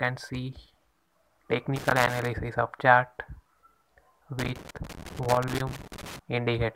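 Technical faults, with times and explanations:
1.76–2.27 s and 4.39–6.19 s, loose connector crackle: a worn contact repeatedly breaks the signal, causing irregular scratchy bursts, seen as jagged dropouts and broadband vertical streaks.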